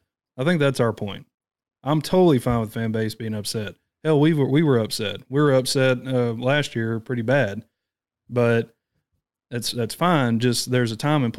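At 2.12 s, between "that's our point I'm" and "fine with fan base", there is a DC step: the waveform's zero line abruptly shifts by about -30 dBFS, as happens when a converter recalibrates or an offset input is switched in. The jump is heard as a low thump or click. The offset then bleeds away slowly, consistent with a 2 Hz high-pass filter, while the speech continues without interruption.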